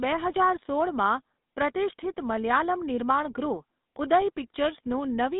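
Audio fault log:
Throughout, GSM full-rate codec: the speech has a buzzy, gravelly roughness from a vocal-tract model driven by coarse pulse excitation, which fits a 13 kbps coder. Nothing passes above 3.8 kHz, unlike a plain band-limited line, which stays smooth rather than rasping.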